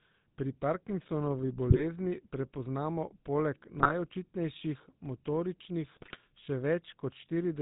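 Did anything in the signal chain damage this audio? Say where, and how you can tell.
Yes. At the codec stage, GSM full-rate coding, consistent with about 13 kbps, rebuilds the voice from a pulse-driven vocal-tract model. This leaves the whole clip buzzy, gravelly and cut off above 4 kHz.

On the radio link, GSM bit errors corrupted the decoder's filter, pitch and gain values, causing squawks and gargling at 1.70–1.84 s, 3.78–3.92 s and 5.84–6.17 s.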